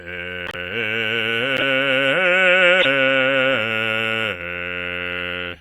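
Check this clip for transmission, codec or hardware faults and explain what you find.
One codec fault recurs three times in this music.

Corrupt frame decoded at 0.47 to 0.55 s, 1.57 to 1.62 s and 2.79 to 2.85 s: damaged compressed frames were decoded anyway, their misread values placing energy at wrong frequencies. Each produces a brief chirpy noise burst, the first near -15 dBFS spanning several frames, the later two louder, peaking near -5 dBFS.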